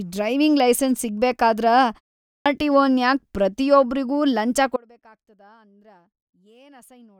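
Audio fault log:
2.24 s: clipped start after a pause. After a short silence of about 0.32 s, the sound resumes abruptly, its first 217 ms or so missing, so the onset lands already in progress with no soft lead-in. The output device has gone idle during the brief gap and takes that long to wake and resume passing audio, swallowing the opening of what follows.
4.77 s to end: audio dropout to a faint residue. The sound cuts out abruptly mid-flow and never returns, leaving only a faint trace roughly 30 dB below its normal level for the rest of the clip. The change is a sudden break, not a pause or fade. Most likely the wanted signal was lost upstream while the path after the break stayed live, so only a faint sound still reaches the output.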